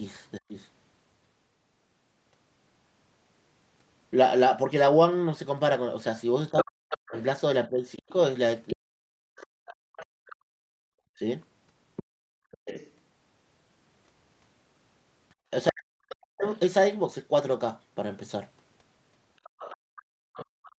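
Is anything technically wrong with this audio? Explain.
Yes. The speech shows three echo-canceller faults, heard against audio that tops out at 8 kHz, as expected from the Opus call path at 32 kbps.

Speech suppressed in double talk: the talker dips by roughly 20 dB for a moment at 0.47 to 0.55 s. From 6.51 to 16.47 s it dips and cuts out in pieces, up to about 40 dB down and about three seconds in total. From 20.08 s to the end it drops again by about 40 dB. The likely cause is that both sides spoke at once, and the echo canceller could not tell the near talker from loudspeaker echo, so it turned both down.

Other side's voice leaking through: a second voice sits under the talker from 6.49 to 12.91 s, roughly 15 dB below the speech, and again from 19.44 s to the end, roughly 20 dB below. The likely cause is that the far end's voice, played on the talker's loudspeaker, reached the microphone, and the echo canceller did not remove all of it.

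Background gated by the echo canceller: the room sound drops out and returns at 9.57 to 12.2 s (about 37 dB down, roughly a second in total), at 15.35 to 15.41 s (about 24 dB), and at 19.5 to 19.8 s (about 32 dB). Each time, the canceller clamped the microphone hard while the loudspeaker played, then let go.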